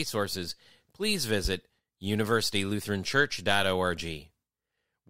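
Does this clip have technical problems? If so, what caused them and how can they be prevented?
Yes. A single loud pop sits at 1.45 to 1.49 s, about 10 dB above the speech, which carries on beneath it. The likely cause is a voltage spike from a connector, switch or static discharge entering the chain. Secure cables, ground equipment properly, and avoid switching devices while recording.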